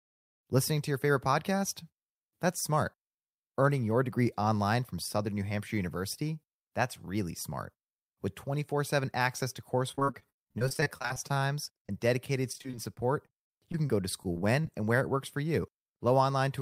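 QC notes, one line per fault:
9.91–11.90 s, repeated packet loss (robotic sound): the speech turns choppy, with many short holes, the longest about 34 ms. Each is patched by stretching the preceding sound, so around a quarter of this stretch is filler.
12.52–14.65 s, repeated packet loss (robotic sound): a lighter return of the same choppy texture, with fewer holes of up to 37 ms. The concealment repeats the last sound into each gap, covering roughly an eighth of this span.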